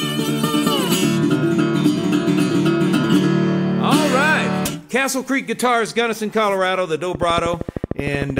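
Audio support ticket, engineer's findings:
Likely interference, faulty connection or power supply injecting pulses: train of clicks 7.15–8.39 s, regular 13 per second, around fifteen, roughly 10 dB above signal, ticking over audio.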